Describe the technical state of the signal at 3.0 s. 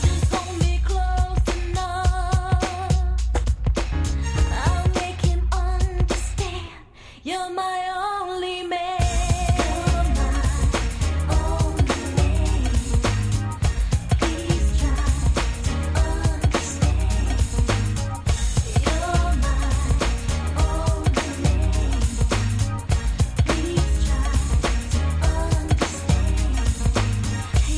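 At 3.0 s the signal is intact, with no audible fault at that moment.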